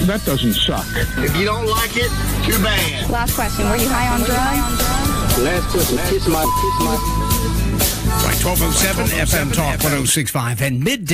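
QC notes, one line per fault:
3.62 to 10.1 s, doubled audio track: a second, full-band copy of the sound runs about half a second behind, a few dB quieter, with no decay or room colour, and it cuts in and out abruptly. Likely a slower capture path summed in.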